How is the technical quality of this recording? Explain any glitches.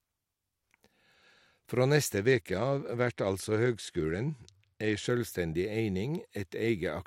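The recording has one clear quality fault, a Bluetooth SBC bit pool drop lasting from about 2.18 s to 5.07 s. Over that stretch the speech loses its treble and takes on a gritty, granular noise, then recovers. The sound points to the encoder cutting its bit pool from around 31 to around 13, roughly 94 kbps, when the wireless link congested. Starved of bits, the highest sub-bands got few or no bits and the remaining bands were coarsely quantised until the rate recovered.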